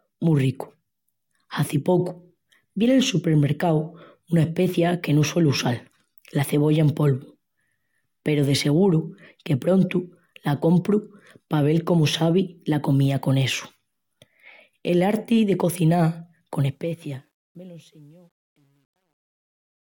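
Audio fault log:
16.55 to 19.99 s, truncation distortion on a fade: as the speech fades out toward the end of the clip, the level stage keeps too few bits and applies no dither, and the graininess fits roughly 10-bit resolution. Low-level detail collapses into coarse square steps, so the tail turns gritty, worst from 17.69 to 19.99 s.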